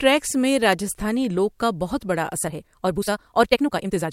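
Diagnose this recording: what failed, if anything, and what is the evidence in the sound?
An electrical switching spike sits at 0.73 s, just before "لوک کا بہت بڑا": a sharp snap or tight cluster of clicks laid over the speech. This points to the analogue wiring stage, most likely a nearby switch or discharge arcing briefly and coupling a few milliseconds of interference into the line.

A time-stretched section runs from 2.41 s to the end, after "لوک کا بہت بڑا". The pace jumps to about 1.73 times normal while pitch holds, sounding rushed. The likely cause is software compressing the audio to fit a length by dropping short segments.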